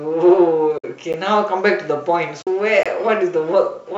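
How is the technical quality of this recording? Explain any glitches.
There are four glitches in this speech clip, two of each kind. It's all short dropouts, with the codec underneath (likely the low-delay AAC used for calls) leaving only light roughness on the voice.

AAC frame loss with muting hits from 0.78 to 0.84 s and again from 2.42 to 2.48 s. Those gaps run 60 ms and 50 ms, which fits six and five lost 10 ms frames. The decoder zeroed the missing spectrum, and the overlapping windows ease the sound down and back up. So you hear soft-edged holes.

A block of digital silence lands at 1.13 s and again from 2.83 to 2.86 s. The first is about 11.6 ms, which fits a 512-sample buffer. The second is about 23 ms, which fits a 1024-sample buffer. The sound cuts out and back with no fade. The short one comes across as a tick, and the longer one as a tiny hole.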